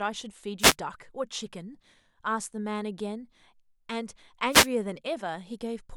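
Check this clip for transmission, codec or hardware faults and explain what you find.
Two wireless microphone noise hits break into this speech, one from 0.59 to 0.75 s and another from 4.50 to 4.68 s. Each lasts under a fifth of a second. The analogue FM radio link fades when reflected copies of the signal cancel at the receiver, so the receiver's own noise rises into the audio and, at the bottom of the fade, turns into clicks. Both hits sound like a brief swish of static over the voice.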